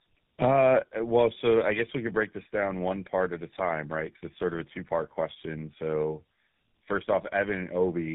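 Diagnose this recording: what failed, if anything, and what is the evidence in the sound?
The speech sounds rough, muffled and warbly for the whole clip, with nothing above about 3.8 kHz, and the grittiness is heavier than a single narrowband link would leave. This is tandem speech coding at the codec stage. The character points to two low-rate speech coders in a row, which fits an AMR-NB 7.4 kbit/s leg followed by GSM full rate, with a G.711 A-law hop between them. Each border decodes and re-encodes, so the second coder models artefacts already baked in by the first, compounding the damage.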